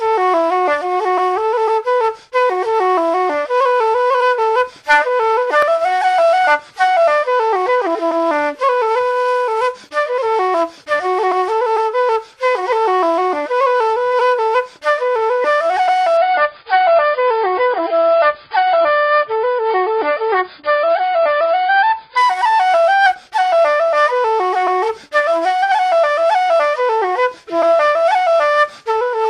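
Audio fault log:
16.17–22.17 s, adaptive stream at a lower bitrate: for six seconds the player switches to a leaner encode, so everything above 5 kHz disappears and the remaining band takes on a smeared, watery codec texture. The sound points to a fall from roughly 96 kbit/s to roughly 16 kbit/s. On a spectrogram the upper energy stops at a flat 5 kHz ceiling at both edges, while the waveform runs on without any gap.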